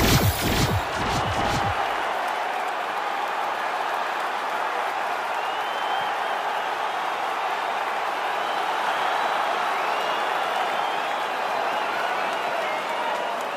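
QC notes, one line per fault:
Nothing to flag here; I listened all the way through and didn't hear any problems in the audio.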